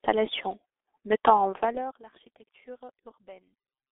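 Throughout the speech, the signal has passed through a G.723.1 codec, an early internet-telephony coder that rebuilds the voice from a sparse model refreshed only every 30 ms. The damage is heavy, consistent with a rate near 6.3 kbit/s. The line band runs from 300 Hz to 3.6 kHz, with nothing above 3.7 kHz, so the voice sounds muffled and hoarse, consonants smear, and the gradual level rises and falls come through as plain fades.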